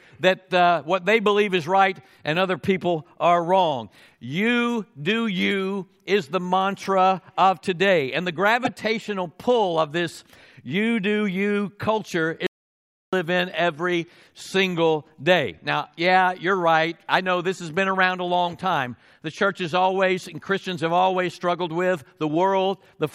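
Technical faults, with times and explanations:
8.65–8.69 s and 18.49–18.58 s, corrupt frame decoded: flipped bits in a few compressed frames each time went to the decoder unchecked, so misread codes and gains put energy at wrong frequencies, heard as short squeaky bursts of about 46 ms and 86 ms.
12.47–13.13 s, audio dropout to silence: the input was lost for about 0.66 s, likely through a broken link or a momentary mute, while recording carried on writing silence, so the sound cuts to total silence with no room tone and then resumes mid-flow.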